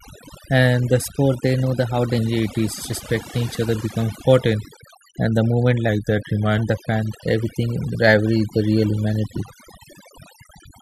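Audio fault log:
throughout: overdone noise removal. The gaps between phrases drop to near silence dotted with brief twinkling specks, and the quieter parts of the speech were cut along with the noise. Individual frequency bands near the suppressor's noise estimate were pushed far down or switched off. Unlike a steady low-pass or a plain gate, the loss flickers band by band, so the residue glitters rather than simply falling silent.
1.04–2.18 s and 5.89–6.59 s: drift correction step. In the first span the audio suddenly runs about 6.3% fast and rises about 105 cents, roughly a semitone. In the second it runs about 6.3% slow and drops about 112 cents. Each shift holds steady. The likely cause is clock-matching software changing the playback rate in one jump to rebalance its buffer. Wow or flutter wobble continuously, whereas these are clean steps with a flat offset.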